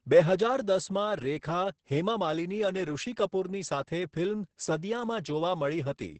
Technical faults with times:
0.00-6.20 Opus voice compression

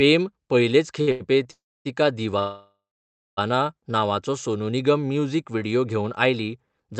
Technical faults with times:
1.01-1.22 short stall from a late packet
1.51-1.87 call audio freeze
2.39-3.39 call audio freeze

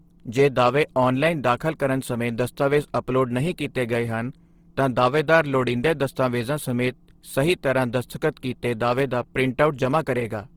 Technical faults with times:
0.00-10.56 Opus compression

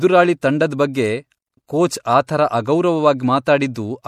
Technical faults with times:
0.00-4.08 MP3 compression
0.41 pre-echo
2.27 pre-echo
3.44-3.47 pre-echo

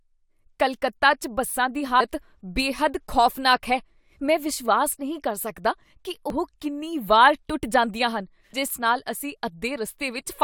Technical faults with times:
1.97-2.01 damaged data in a compressed stream
6.30 damaged data in a compressed stream

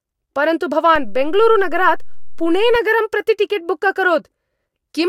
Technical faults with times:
0.96-2.75 DC step

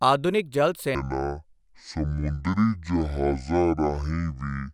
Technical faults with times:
0.95-4.74 section at the wrong speed

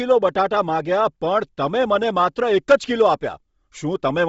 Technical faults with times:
0.00-4.28 Bluetooth LC3 compression

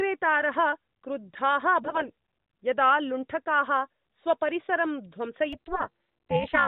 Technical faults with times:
1.82-2.09 AMR bit errors
5.53-6.67 overlap-add ripple

